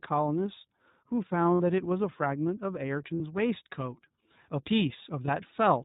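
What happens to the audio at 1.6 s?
From 1.54 to 1.60 s there are lost iLBC frames, about 60 ms, which fits three dropped 20 ms frames. The decoder repeats the last pitch cycle mixed with noise, producing a short, held buzzy vowel before clean recovery. Underneath, the iLBC codec band-limits everything to 4 kHz and adds plainly audible roughness, consistent with its 15.2 kbps mode.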